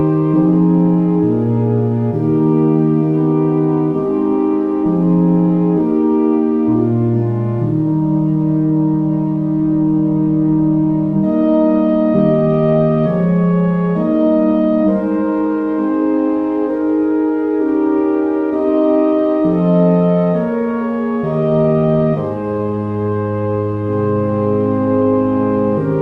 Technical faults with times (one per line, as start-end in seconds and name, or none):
none